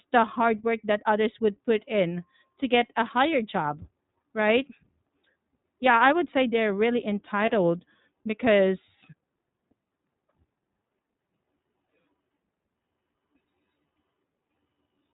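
Speech passed through the iLBC codec, likely at about 15.2 kbps with 20 ms frames, so nothing above 4 kHz survives. The voice sounds narrowband, slightly rough and synthetic, and each frame's excitation is coded on its own. Lost iLBC frames occur at 5.92 to 5.95 s, just before "I would say they're", and at 7.46 to 7.50 s, just after "would say they're really". Each loss fits a single dropped 20 ms frame, and the decoder fills it by repeating the last pitch cycle mixed with noise. The result is a brief held, buzzy vowel before the voice snaps back almost immediately.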